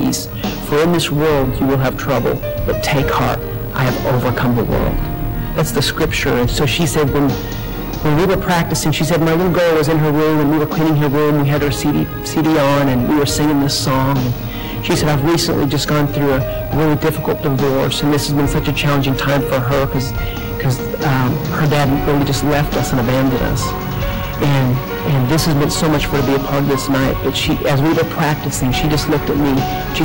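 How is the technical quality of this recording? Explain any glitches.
Technical quality is poor, because the whole recording is badly overloaded. Hard clipping runs throughout: the signal is pushed about 21 dB past what the chain can pass, so nearly a third of the waveform gets sliced flat. Those squared-off peaks spray high harmonics everywhere, giving a constant harsh fuzz on every loud moment rather than occasional crackle.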